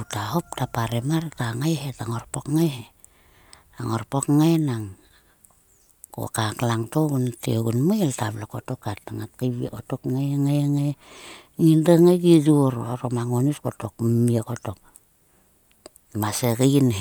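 No technical faults can be heard anywhere in the speech.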